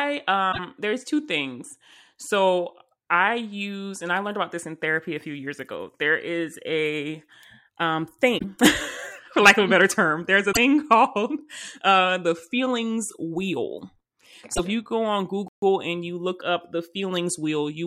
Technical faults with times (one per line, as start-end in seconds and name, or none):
0.51-0.59 broken MP3 bit reservoir
8.37-8.44 broken MP3 bit reservoir
10.52-10.57 broken MP3 bit reservoir
14.54-14.59 broken MP3 bit reservoir
15.48-15.62 playback stall